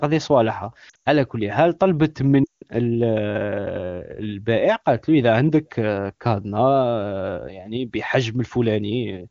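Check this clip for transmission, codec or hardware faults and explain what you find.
Two bursts of lost AMR speech frames, from 0.89 to 1.08 s and from 2.44 to 2.63 s. Failed frames make the AMR-WB decoder (the 23.85 kbit/s HD Voice codec) reuse its last good settings at falling gain, so speech drops to near silence within two frames. The first burst loses about 140 ms scattered across 160 ms, including a 100 ms run. The second loses about 180 ms.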